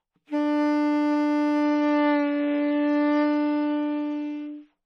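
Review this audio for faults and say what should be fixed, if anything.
At 1.63 s the adaptive stream drops to a lower bitrate and stays there to the end. A slowed connection pushed the player onto a lighter encoding, which here fits a switch from about 128 kbit/s MP3 down to roughly 32 kbit/s. The change is abrupt but seamless: the treble disappears above 6.6 kHz, the top end turns dull, and swirly codec artefacts increase. To prevent it, keep a larger playback buffer or cap the adaptation floor so the stream never falls to such a low tier.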